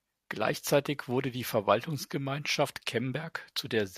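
A short speech recording with nothing technically wrong to be heard in it. No fault turns up at any point in the audio.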